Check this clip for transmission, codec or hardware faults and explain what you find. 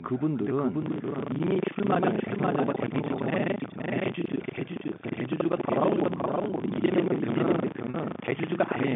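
Three faults stand out: a doubled track, buffer tearing, and a brief packet loss with pitch repetition, all heard over a narrow telephone band of roughly 150 Hz to 3.6 kHz.

Doubled audio track, throughout: a second, dry, full-band copy of the speech trails the original by about half a second, only around 5 dB quieter, with no reverberant tail. The likely cause is the signal being captured again through a slower path, or an edit stacking two misaligned copies.

Buffer tearing, from 0.8 s to the end: a steady robotic rattle at 25 Hz rides on the speech and drops away in pauses. The writer and reader of the ring buffer have drifted so they cross every period, a rate that fits a 40 ms buffer. Roughly half of each buffer carries audio about a tenth of a second stale, spliced in with hard edges.

Packet loss with pitch repetition, 7.90 to 7.94 s: for 40 ms the speech holds on a slightly stretched, buzzy tone. 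The receiver filled the gap, which points to two lost 20 ms packets, by looping the last pitch cycle and fading it before normal audio resumed.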